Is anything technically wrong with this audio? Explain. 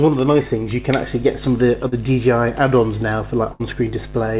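Yes. There are two packet-loss faults, heard over a call path with nothing above 4 kHz, which points to narrowband G.711 mu-law.

From 1.88 to 1.94 s there is a short concealed packet loss. About 40 ms of audio never arrived in time. The receiver covered the hole by extending the last sound it had for 37 ms, then blended back into the real signal. It comes across as a brief smear or wobble. A very short sound inside the gap can disappear.

From 3.52 to 3.62 s there is a burst of packet loss. About 80 ms went missing in a row. The receiver stretched the preceding sound across 78 ms and turned it down as the gap went on. So you hear a held, fading continuation instead of what should be there. The audio then picks up further along, and the part in between is simply gone.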